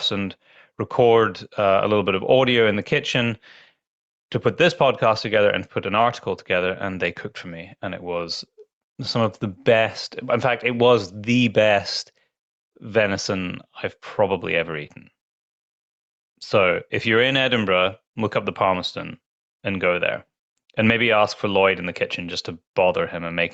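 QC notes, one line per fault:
Throughout, gain pumping: a level swing of roughly 5 dB, so loud and quiet passages sit squashed close together. The likely cause is mic gain set well too high, with a fast limiter or compressor clamping down on each loud burst and releasing in the gaps. The top end stopping at 8 kHz fits the Opus call path.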